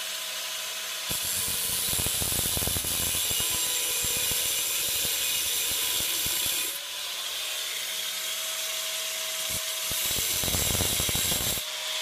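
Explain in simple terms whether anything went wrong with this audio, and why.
Two brief smeared, noisy blips interrupt the sound, at 2.80 to 2.86 s and 10.50 to 10.53 s. This is AAC frame loss with concealment: tiny chunks of audio went missing, and the player patched each gap by guessing from the sound just before it.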